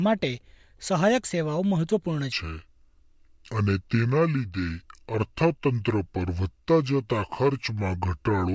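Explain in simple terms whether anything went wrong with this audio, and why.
From 2.32 s to the end, the speech turns slow and deep. This is a wrong sample rate: the audio plays at two-thirds speed, about 7 semitones lower, which fits sound recorded at 24 kHz but played back at 16 kHz without conversion.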